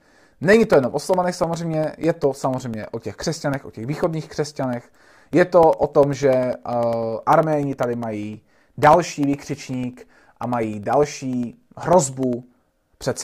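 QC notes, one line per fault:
0.13–13.13 s: periodic USB or driver dropouts. Roughly every 0.1 s a gap of around a millisecond is blanked to silence as the bus or driver stalls, giving evenly spaced ticks that sound only while speech is present, unlike random clicks or irregular packet loss.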